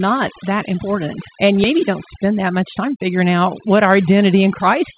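Overdone noise removal runs through the whole speech clip. The reduction was set too strong. Every frequency band that sits close to the estimated noise floor gets pulled far down or shut off. Quiet parts of the speech are caught along with the noise. Between phrases the background falls to near silence, broken by small twinkling specks. The voice also stops dead at 4 kHz, the expected ceiling for G.711 mu-law on a call path.

At 1.64 to 1.66 s there is a skip ahead. Roughly a second of speech is missing. Nothing fills the hole. The audio on either side is joined almost directly, with no audible gap. Playback simply lurches forward. The receiver dropped that stretch while later audio was already queued, cutting the delay by around a second in one step.

From 2.24 to 3.05 s comes a jitter buffer speed-up. The buffer was holding more audio than its target. To bring the delay down, it removed short pieces of one or a few pitch periods, again and again. 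About 50 ms goes in total. Speech runs at 106% of normal speed here. The pitch stays unchanged. The delivery sounds slightly hurried for that stretch.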